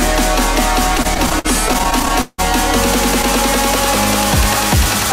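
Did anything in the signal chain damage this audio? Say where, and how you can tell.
Yes, at the network jitter buffer: repeated stalls (stutter) from 0.97 to 2.40 s, with held sound filling gaps of up to 169 ms. The audio drags rather than skipping as dropouts would.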